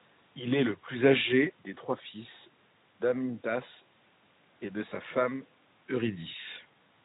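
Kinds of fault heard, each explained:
No technical fault can be heard anywhere in the signal, and the only level changes, near 1.0 s and 5.5 s, are the talker moving relative to the microphone.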